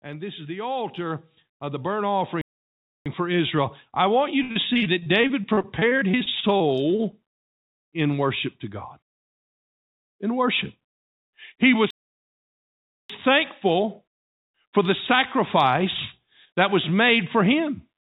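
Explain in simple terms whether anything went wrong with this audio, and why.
Several things go wrong in this speech clip.

From 0.05 s to 3.66 s there is automatic gain rising. The recording level creeps upward until just before "I want you", because the automatic level control judged the input too quiet and kept turning it up. The voice and the background get louder together, slowly and smoothly. That smooth rise is what separates it from someone simply moving closer to the microphone, which would make the voice louder but not the background.

There are two playback stalls. The first runs from 2.41 s to 3.06 s, about two-thirds of a second, and happens while the level is still rising. The second runs from 11.90 s to 13.10 s, about 1.2 seconds. Each time the sound stops dead in mid-flow, goes silent, and then carries on. The likely cause is that the player ran out of audio data or was held up briefly. 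A stall is one clean block of silence, not a run of broken sound.

From 4.43 s to 7.15 s, right after "I want you", there is repeated packet loss, which gives a robotic sound. Small pieces of audio keep going missing, about two dozen times in under three seconds, each gap a few hundredths of a second long. The system patches each hole by stretching the previous sound, so the speech comes out choppy.

Throughout the clip, the call path carries nothing above 4 kHz, which gives it the narrow sound of a telephone line.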